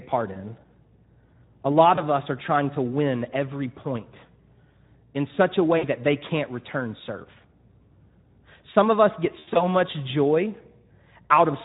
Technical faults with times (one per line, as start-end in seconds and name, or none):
0.00-11.65 Speex codec
0.33-0.40 VoIP packet loss concealed by the speech codec
1.95-2.03 VoIP packet loss concealed by the speech codec
5.77-5.88 VoIP packet loss concealed by the speech codec
9.39-9.69 VoIP packet loss concealed by the speech codec